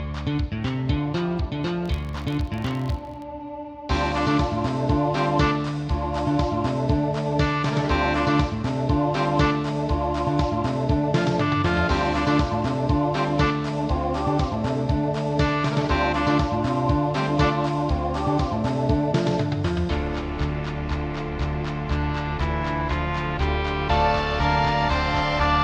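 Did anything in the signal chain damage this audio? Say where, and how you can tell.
Yes. From 1.86 to 3.26 s there's a steady buzz at about 46.9 Hz riding on the sound, louder where the audio is louder. That's the filter restarted on every block: somewhere in the block-based processing, a filter throws away its state at each block boundary and starts cold, so every block opens with a little transient. Ticks repeating at that rate fit a 1024-sample block, and they fuse into a buzz that scales with level.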